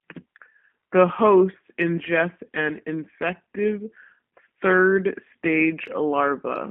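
Throughout the speech runs through a G.729 codec. A 200 Hz to 3.4 kHz line band strips highs and lows, and pulse-driven resynthesis leaves a plainly audible rough, buzzy texture fitting an 8 kbit/s coder. This synthetic grain, not just the narrow band, separates it from clean telephone filtering.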